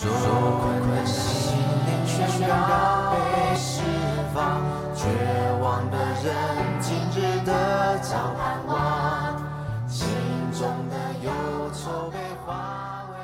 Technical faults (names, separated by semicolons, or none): doubled audio track